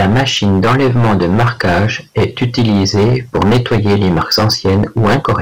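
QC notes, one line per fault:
throughout, hard clipping: the speech is pushed about 18 dB beyond what the stage can pass, so roughly a fifth of the samples are sheared flat at the ceiling. Those squared-off peaks spray harmonics high up the spectrum, heard as harsh fuzz on every loud syllable.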